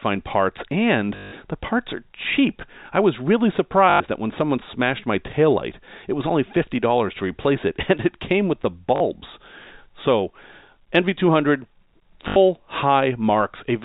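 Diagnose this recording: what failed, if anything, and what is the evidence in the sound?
Short robotic stutters with a 50 Hz buzz break the speech at 1.16–1.32 s after "parts and", 3.9–4.0 s after "cheap I was really", 8.96–9.0 s after "it came with the", and 12.28–12.36 s. This is network packet loss with the last packet repeated: the receiver replays the last 20 ms packet out of step with the pitch.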